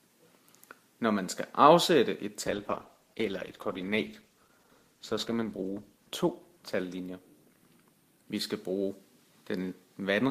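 The audio carries a call bitrate drop from 2.49 s to 10.03 s. The call's bandwidth estimate fell and the encoder was pushed to spend far fewer bits, so the sound turns coarse and muffled, with the high frequencies cut away. The degradation fits a fall from roughly 128 kbps to about 13 kbps, with the worst stretch lasting 3.21 s before quality begins to recover.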